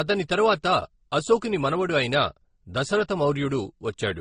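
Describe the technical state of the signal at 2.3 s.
At 2.3 s the speech carries the same layered codec smear heard across the whole clip, likely from transcoding between lossy codecs, with a low-rate MP3-style pass re-encoded as Opus. The second encoder wastes bits on the first one's artefacts and adds its own, so you hear both codecs' artefacts together, with nothing above about 20.1 kHz.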